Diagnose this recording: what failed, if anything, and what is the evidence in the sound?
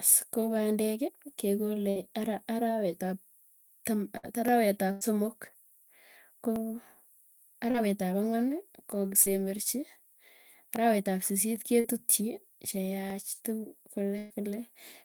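Burst of packet loss, on the network side, at 1.89–1.97 s, 4.17–4.25 s, 4.91–5.03 s and 14.18–14.32 s. Each gap is about 60, 60, 100 and 120 ms. The receiver stretched the last sound into a fading buzz or hiss, then the speech jumps ahead with that stretch gone.

Dropped samples at 2.39 s (just before "arawet ap"), 4.48 s, 6.56 s, 10.76 s (just before "arawet ab sisit ke") and 13.10 s. Each is a lone sharp click where less than a millisecond of waveform vanishes. The likely cause is the driver or buffer stage skipping samples.

Short concealed packet loss, network and jitter-buffer stage, at 7.71–7.76 s, 9.22–9.28 s and 11.80–11.86 s, the last just after "arawet ab sisit ke". About 40 ms went missing each time, and the decoder's synthesized fill is heard as a brief smear or wobble before the real speech returns.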